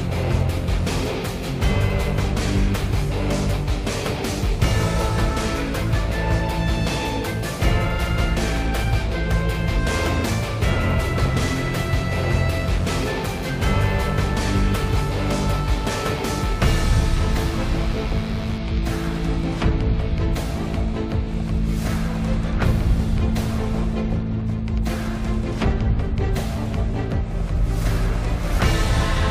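From 11.17 s to 18.61 s the audio carries a steady, raspy mains buzz, roughly 15 dB below the signal. Sharp switching spikes from a dimmer, rectifier or unshielded lead enter twice per 50 Hz cycle, so the waveform shows a spike every 10 ms. On a spectrogram it appears as a comb of horizontal lines at multiples of 50 Hz, reaching up to several kHz, starting and stopping at those times.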